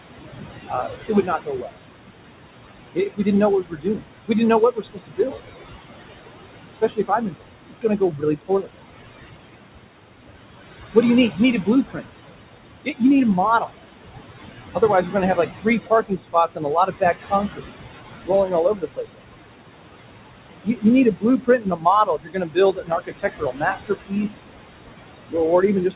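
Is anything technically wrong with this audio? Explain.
Yes. Noise suppressor artifacts run through the whole clip: the suppressor pulls the steady room noise down by about 20 dB between phrases.

Speech is also cut by the noise suppressor at 0.02–1.77, 2.94–5.42, 6.73–8.70, 10.94–13.76, 14.74–19.37 and 20.64–25.95 s. In these stretches soft speech is mistaken for noise and dropped by about 21–22 dB, so parts of the speech sound swallowed or faint. A dropout would be abrupt silence instead.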